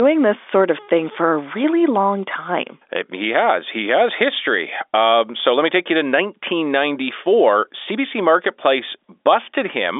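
Nothing here goes wrong; it's simply speech on an ordinary G.711 phone line, with the narrow telephone band that stops at about 3.7 kHz.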